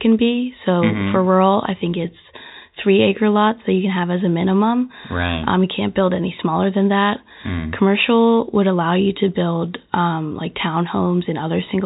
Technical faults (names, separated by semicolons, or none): none